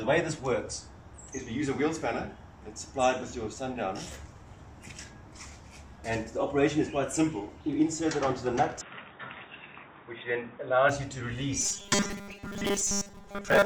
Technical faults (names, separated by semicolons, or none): input switched to a poorer device; robotic sound from repeated short buffers